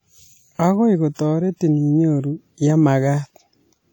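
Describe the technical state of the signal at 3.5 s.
At 3.5 s the speech carries plainly audible damage, likely from WMA compression, present across the whole clip. Noise spreads across long transform blocks. It sounds ringing and washy, with hiss breathing along with the signal, which fits a bitrate near 48 kbps.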